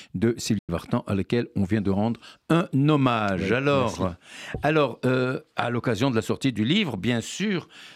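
The receiver lost frames and muted from 0.58 to 0.70 s, a digital broadcast dropout: speech fades out in 8 ms, and 96 ms is lost.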